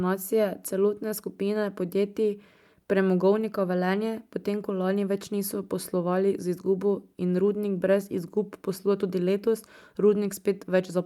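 Speech recording with no audible technical faults.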